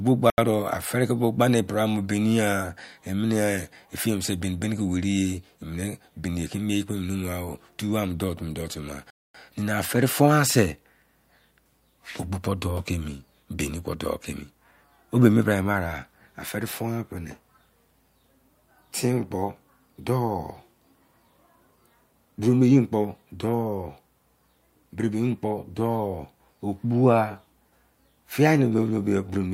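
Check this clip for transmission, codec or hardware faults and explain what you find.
Two dropouts are present. At 0.30 to 0.38 s and 9.10 to 9.34 s, the speech cuts to dead silence for 80 ms and about 240 ms, then resumes: a Bluetooth stall, likely from interference starving the headphone buffer until packets were resent.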